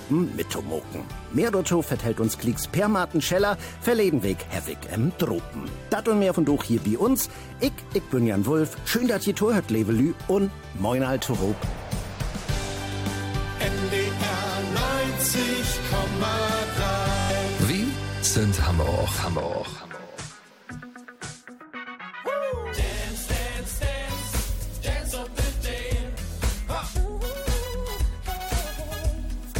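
The audio has two faults. At 6.34 s, compressed frames are skipped: about two frames of 21.3 ms each, roughly 40 ms of audio, never play. The sound jumps forward. From 17.20 to 17.30 s, a system hang loop repeats one 21.33 ms piece of audio five times while the playback path was frozen. This fits a 1024-sample buffer cycling at 46.9 Hz, heard as a brief buzz that replaces about 100 ms of audio.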